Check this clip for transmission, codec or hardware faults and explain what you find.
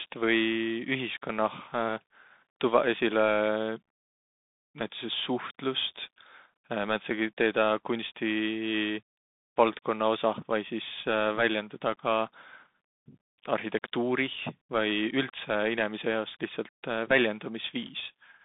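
One codec fault runs through the whole speech clip. The Bluetooth CVSD headset codec is present throughout. The band runs from 150 Hz to 3.7 kHz, with nothing above 3.8 kHz. CVSD codes one bit per sample as up or down, with an adaptive step, which points to a 64 kbps link. Fast, loud high sounds outrun the step. The damage is plainly audible as gritty distortion, scratchy s sounds and a granular hiss under the speech.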